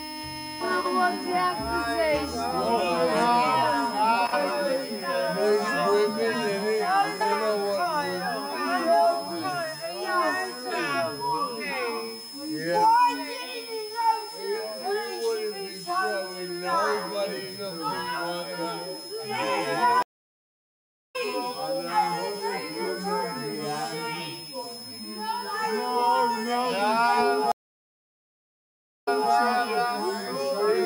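A switching power supply is running in an audible burst mode or beating with another one, and its whistle sits under the whole clip as a high tone wandering between 5.15 and 5.2 kHz, roughly 15 dB below the programme. Because it drifts slightly rather than holding steady, it reads as a thin, shifting whine, a clear switching supply whistle.

At 20.02 s the network connection drops and the player has to reconnect and restart its decoder mid-stream. That is a stream reconnect: 1.12 s of silence until 21.16 s, after which the audio picks up about a second further on, so that stretch is simply missing. At 27.52 s the connection fails again, giving 1.54 s of silence, with the disruption lasting up to 29.32 s. This time the server resends a burst, and playback resumes 0.26 s earlier than where it broke off, so a short piece is heard twice.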